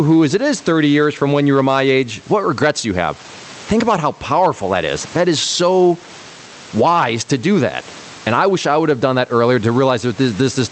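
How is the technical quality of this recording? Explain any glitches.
The main problem is gain pumping, present from start to finish. The background sits about 32 dB under the speech, and the call-codec path shows a top end that stops around 8 kHz, consistent with a modest Opus bitrate.

Gain pumping runs throughout. The input gain is likely set far too high, so a fast limiter keeps clamping it on every loud syllable, a swing of roughly 15 dB. On a waveform, loud and soft passages look flattened to similar heights.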